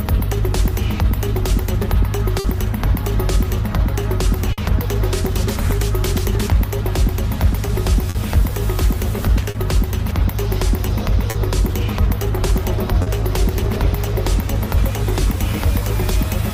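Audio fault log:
2.39–2.47 s, 4.53–4.61 s and 8.10–8.18 s: burst of packet loss. In each case about 40 ms of audio never arrived in time. The receiver filled a 50 ms gap by extending and fading the last sound, as either a held buzz or a dying hiss. Playback then jumps ahead, skipping the lost portion.
9.51–9.58 s, 11.31–11.38 s and 13.03–13.10 s: short concealed packet loss. About 40 ms went missing each time and was replaced by an equal 40 ms of synthesised continuation, either pitched or noise-like, then blended back into the real audio. The result is a brief smear or wobble, and a short sound may vanish.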